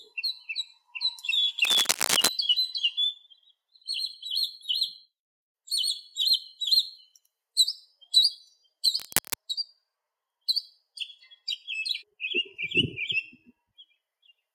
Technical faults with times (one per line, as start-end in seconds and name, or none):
1.64-2.28 cable scratch noise
8.99-9.36 cable scratch noise